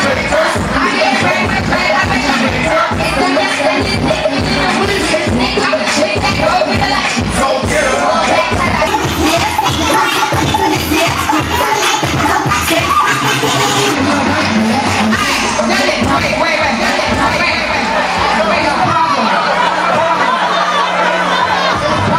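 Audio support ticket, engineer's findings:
Gain pumping, whole clip: gain swinging by roughly 5 dB under loud sounds, dynamics squashed. Likely cause: input gain set far too high, with a fast limiter or compressor clamping down on every peak and releasing in the pauses.

Section at the wrong speed, 8.87 to 13.95 s: audio runs hurried and high, 1.38 times normal speed, pitch raised about five semitones, snapping back at both edges. Likely cause: this stretch played or edited against the wrong clock, so speed and pitch shift together.

Doubled audio track, 16.7 s to end: a full-band copy trails around a second behind, about 5 dB quieter, dry with no decay or room colour, starting abruptly. Likely cause: a second capture through a slower path, or an edit leaving two out-of-step copies mixed together.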